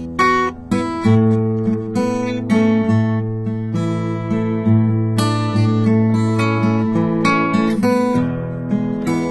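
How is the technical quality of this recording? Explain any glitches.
Technical quality is poor. Throughout the music, the treble sounds synthetic and grainy, and nothing reaches above 11.8 kHz. This is likely HE-AAC compression at a very low bitrate, around 16 kbps. Upper bands are copied from lower ones, so bright detail turns metallic and gritty.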